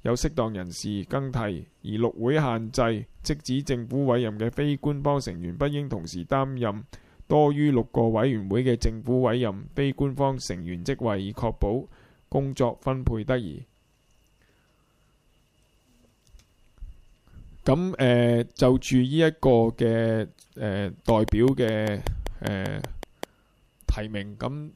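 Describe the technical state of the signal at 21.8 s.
A regular ticking, about 5.1 clicks per second, sits over the sound here as part of a train of clicks running from 21.09 to 23.24 s. The ten or so similar pulses peak roughly 15 dB above the signal, likely from interference injecting repeated spikes.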